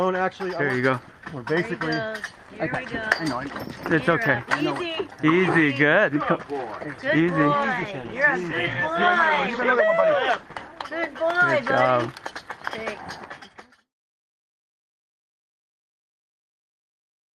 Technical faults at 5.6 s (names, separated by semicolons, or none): none